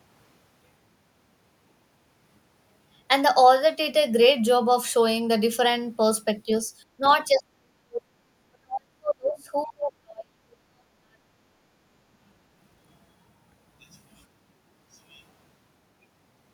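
At 6.46 to 6.50 s the speech dips by only a few decibels, at 6.98 to 7.04 s by about 10 dB, and from 7.27 to 11.44 s it is pushed down hard, roughly 40 dB at its deepest, for around four seconds. The pattern is speech suppressed in double talk, likely from an echo canceller that could not tell the near talker from loudspeaker echo and attenuated everything while the far side spoke.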